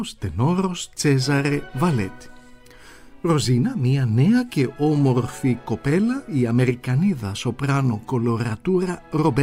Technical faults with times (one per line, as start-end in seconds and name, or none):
none